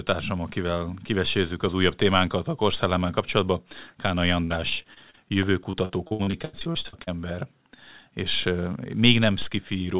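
From 0.44 s to 9.92 s there are periodic USB or driver dropouts: every 0.5 s, about twenty times, a short interruption in the bus or driver stream drops roughly a millisecond of audio and replaces it with silence. Each one is heard as a regular tick whenever speech is present.

From 4.44 s to 5.35 s, repeated packet loss produces robotic sound. Six gaps remove 180 ms, the longest 61 ms, and each is concealed by extending the preceding sound, covering 18% of the span. The speech comes out choppy, with pieces missing.

A second, denser burst of repeated packet loss runs from 5.71 s to 7.09 s. Fourteen gaps remove 480 ms, the longest 82 ms, and concealment covers 34% of the span. The robotic, broken-up quality is stronger here. Throughout, nothing is present above 4 kHz, consistent with a G.711 mu-law call path at 64 kbps.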